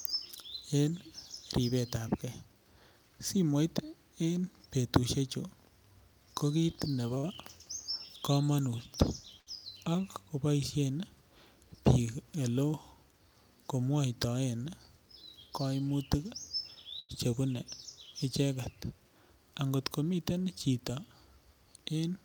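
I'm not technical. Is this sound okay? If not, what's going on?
No, not quite. It's speech that hiccups in a few spots because bits of it arrived late over the network.

From 6.91 to 7.25 s, just after "ko kiit", you'll hear repeated stalls, or stutter. The data kept showing up a little too slowly, so the player ran dry four times in that third of a second. Each time it filled in by holding onto the last sound, about a tenth of a second in total, the longest pause around 50 ms. Nothing is actually lost, but that stretch drags and sounds choppy.

There are also two short stalls from a late packet, one at 9.40 s and another at 16.99 s. In each case one chunk of audio simply wasn't there on time, so the player stretched the sound it already had until the chunk arrived, then carried on from exactly where it left off. The first hold lasts about 70 ms and the second close to 100 ms. You'll hear a sound drawn out a touch too long, maybe with a faint buzz or dip, but no missing speech.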